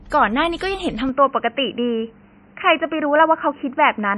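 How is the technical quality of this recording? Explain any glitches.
The recording quality is poor, with two faults.

MP3 compression runs through the whole clip. Nothing is heard above 11.3 kHz. The damage is heavy, which fits a low bitrate around 32 kbps. Short of bits, the encoder drops the treble and switches weak frequency lines on and off. The speech sounds watery and swirly, with smeared consonants.

From 1.09 s to the end, the sound points to the input being switched to a poorer device, likely a headset or lesser microphone. There is no gap at the switch and the level stays about the same. Everything above 3 kHz disappears, so the speech turns dull and boxy. A faint new noise floor appears, roughly 40 dB below the speech.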